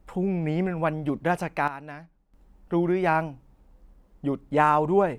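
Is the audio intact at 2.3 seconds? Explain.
No. At 2.3 seconds the audio is inside a sudden gain jump running from 1.68 to 2.34 s. The likely cause is a digital gain setting changed from one sample to the next without a ramp. The speech and its background noise both drop abruptly by about 12 dB, then return.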